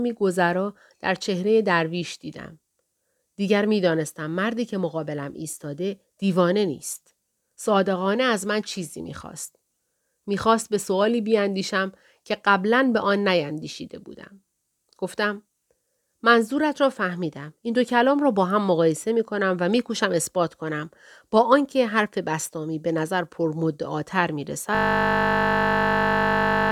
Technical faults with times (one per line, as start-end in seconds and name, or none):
24.75-26.72 system hang loop